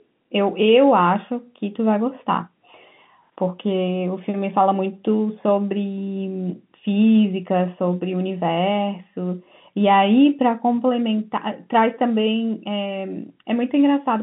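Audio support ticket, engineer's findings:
No defects found; speech sits in the expected telephone band, roughly 150 Hz to 3.5 kHz with nothing above about 3.7 kHz, consistent with a G.711 mu-law path at 64 kbps.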